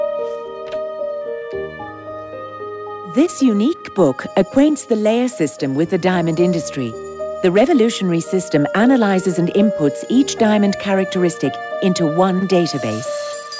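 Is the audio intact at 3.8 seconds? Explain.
No, not quite. From 3.76 to 3.82 s there is a short stall from a late packet. The jitter buffer ran dry, so the receiver stretched the last sound by about 44 ms and then resumed from the same point once the packet arrived. Nothing is lost, but the sound is held slightly too long, with a faint buzz or dip and everything after it shifted 44 ms later. On a spectrogram the frames there look frozen and smeared sideways, while the waveform shows repeated cycles.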